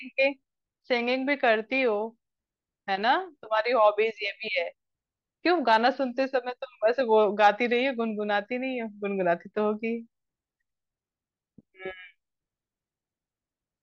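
No technical faults can be heard in this recording.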